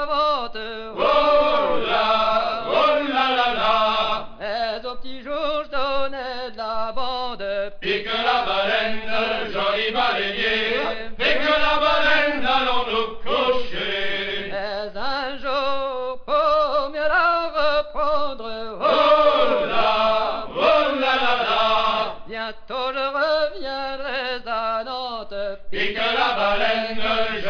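Nothing here sounds technically wrong; the audio just runs its course without anything that catches the ear as a fault.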